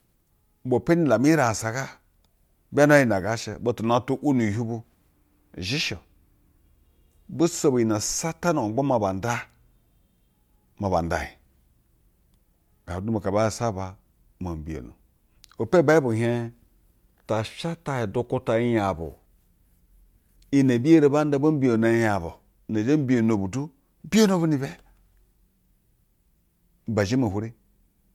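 No technical faults are audible in the speech.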